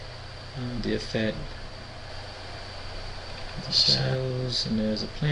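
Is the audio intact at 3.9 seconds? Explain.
No, a doubled audio track runs from 2.09 to 4.15 s, likely from a second, slower capture path mixing the sound in again. A full-band copy at about equal level trails by roughly a tenth of a second, giving a dry, abrupt slapback echo.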